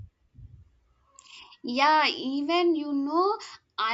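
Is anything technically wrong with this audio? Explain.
No, the speech signal shows no technical faults, with its level, continuity and frequency content holding steady throughout.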